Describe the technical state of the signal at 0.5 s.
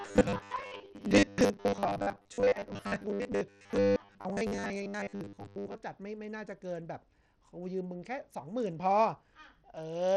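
At 0.5 s the speech carries a robotic sound from repeated short buffers, running from 0.01 to 5.75 s. It is likely caused by audio arriving too seldom, so the playback keeps replaying a short stretch while much of the real signal, roughly two thirds or more, is skipped. The replays impose a rigid buzz at 100 Hz, which fits a 10 ms buffer. Unlike plain dropouts or stutter, the sound never goes silent. It stays continuous but flattened into a metallic drone that only loosely follows the speech.

Underneath, and for the whole clip, there is plainly audible Bluetooth SBC compression, likely at a low bitrate of about 80 kbps. SBC splits the signal into a few wide bands without any model of hearing, and with so few bits the upper bands are starved. The treble therefore flickers or vanishes, and a gritty, aliased noise rides on the sound. This differs from a simple low-pass filter, which would remove the top cleanly and leave no grain behind.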